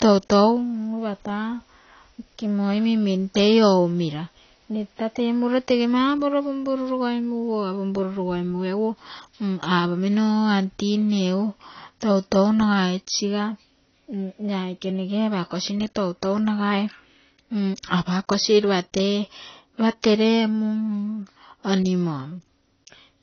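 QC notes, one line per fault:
Throughout: AAC compression damage, plainly audible. Nothing remains above 6.5 kHz, so the speech sounds dull, with a smeared, warbling texture on sibilants and sustained sounds. This is likely AAC-LC coding at a low bitrate, fitting roughly 24 kbps, where the encoder discards the top band and quantises the rest coarsely.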